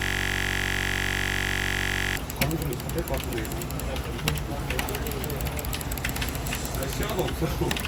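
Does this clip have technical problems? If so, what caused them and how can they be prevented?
Yes. From the very start until about 2.17 s, there is a system hang loop. It is already under way when the clip begins. One slice of audio, 21.33 ms long, repeats exactly, about a hundred times. At that length it fuses into a steady buzz at 46.9 Hz. The computer or driver stalled, and the sound hardware kept replaying the same ring buffer. The loop length fits a 1024-sample buffer. To prevent it, fix the driver or system stall and have the audio device output silence when its buffer stops being refilled.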